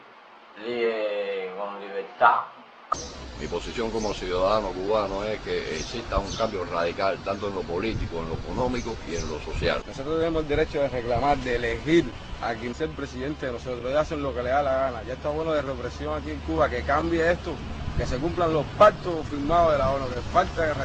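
Clock drift between sender and receiver runs through the whole clip. The sending clock is about 2% slow, so the receiver's jitter buffer keeps draining and must be refilled. The sound comes out with a slightly uneven, faltering pace rather than a steady flow.

Repeated timing corrections run from 0.34 s to 20.53 s. To keep up with the slow sender, the receiver repeatedly duplicates short pieces of audio at irregular intervals. This stretches playback to 98% speed and adds roughly 0.4 s overall.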